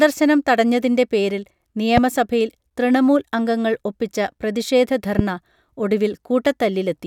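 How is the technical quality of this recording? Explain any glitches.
The speech recording has two loud pops. The first is at 1.97–2.00 s, right after "തടഞ്ഞതിൻറെ പേരിൽ", and the second is at 5.19–5.21 s. Each is a single sharp click standing roughly 15 dB above the speech, which continues underneath. Both are likely caused by a brief voltage spike from a plug, a switch, static or a driver glitch.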